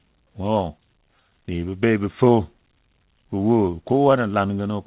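From 0.8 to 1.71 s the speech has repeated stalls, a stutter. Packets arrived late, so the playout buffer kept running dry. Seven short gaps, none longer than 12 ms, were filled by stretching the last sound. Nothing is lost, but the speech drags and catches. All of it sits in a band ending at 4 kHz, which fits a narrowband G.711 call path.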